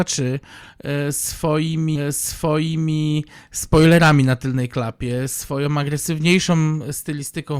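A stream segment repeated: the player queued the same one-second segment twice, so speech from 1.95 to 2.95 s plays again after a small blip, just before "spoilerami na tylnej klapie".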